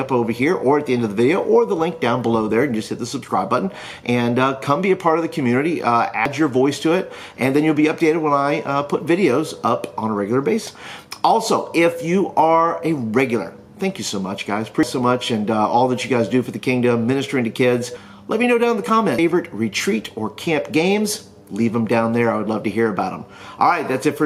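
Damaged data in a compressed stream corrupts frames, so the decoder misreads them, loses sync and hunts for the next frame header. A brief glitch results, from 6.26 to 6.29 s, then as shorter blips at 10.67, 14.83 and 19.18 s.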